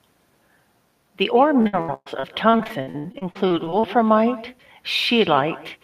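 A speech clip carrying two faults. Throughout, every phrase is trailed by a quieter, thinner copy, about 18 dB down and arriving roughly 150 ms later. This is echo with no canceller. The far end's loudspeaker feeds its microphone, and the speech returns uncancelled. From 1.61 to 3.85 s there is repeated packet loss, and it sounds robotic. Short holes recur throughout that span, the longest 118 ms. Each is patched by stretching the previous sound, giving a choppy texture with pieces missing. About a third of the span is concealed.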